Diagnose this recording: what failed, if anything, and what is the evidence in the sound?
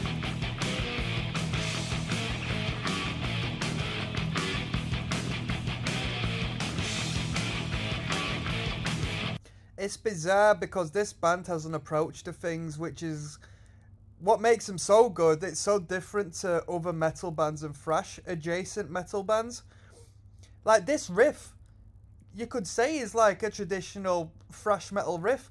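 It's the sample-rate converter. The resampler restarted on every block, so each 20 ms block edge glitches, giving a 50 Hz buzz throughout the 48 to 24 kHz conversion.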